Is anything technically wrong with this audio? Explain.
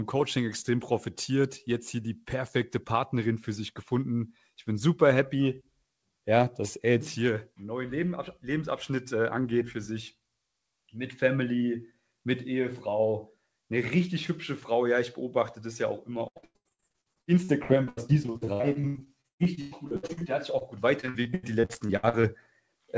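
Yes. From 16.28 to 20.23 s the sound turns choppy and robotic, with a stuttering quality and pieces dropping out. It returns between 21.01 and 22.25 s. This is repeated packet loss (robotic sound). Dozens of short gaps arrived too late or not at all, the longest 115 ms in the first stretch and 81 ms in the second. Each was patched by extending the preceding sound, covering about 40% and 37% of those spans.

Between them, at 20.59 to 20.63 s, there is a brief smear or wobble. This is short concealed packet loss: 20 ms of audio never reached the decoder in time. The receiver bridged it by continuing the previous sound, then blended back into the real signal. Throughout, nothing sounds above 8 kHz, which fits a wideband call codec such as 64 kbps G.722.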